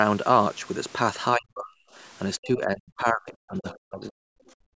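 A speech recording shows speech suppressed in double talk from 1.35 to 1.78 s and again, in pieces totalling about one and a half seconds, between 2.38 and 4.21 s. The voice sinks by as much as about 40 dB, most likely because an echo canceller could not separate the local talker from the loudspeaker echo during overlapping talk and turned everything down. The waveform shows sudden gouges in the envelope, and the spectrogram shows thinned, gapped bands. From 4.55 s to the end, the background is gated by the echo canceller: the room sound falls away by up to about 32 dB for roughly 200 ms. On a spectrogram, the noise floor blanks into near-black, and the waveform flattens to almost nothing. The spectrogram also stops at 8 kHz, consistent with call microphone processing.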